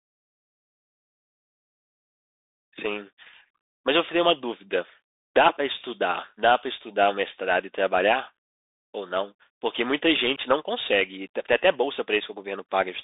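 A speech recording heard throughout through a Bluetooth CVSD headset codec: the band runs only from about 250 Hz to 3.7 kHz, with nothing above 3.8 kHz, and plainly audible damage. What separates it from a simple telephone band-limit is the codec's one-bit delta tracking, which fits a 64 kbps CVSD link. The adaptive step lags loud high-frequency energy, so s sounds turn scratchy, and a grainy hiss sits under the speech.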